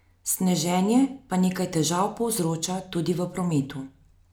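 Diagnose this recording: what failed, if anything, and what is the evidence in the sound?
Nothing in the signal chain appears to have failed: the speech is continuous and intact, with no audible disturbance introduced at any stage between capture and playback.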